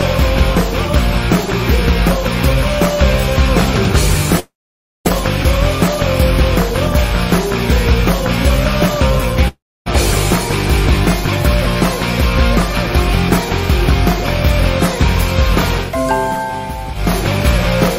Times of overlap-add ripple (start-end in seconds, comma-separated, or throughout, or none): none